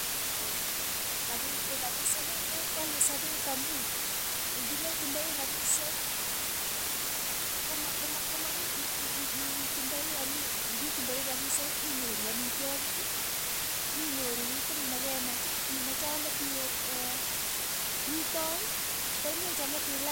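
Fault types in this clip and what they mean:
Low bit depth with dither: the speech is reduced to about 4 bits, with dither added before rounding, leaving a constant, even hiss about 10 dB below the speech.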